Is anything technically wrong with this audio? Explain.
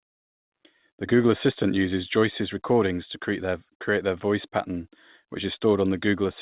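No, nothing is technically wrong.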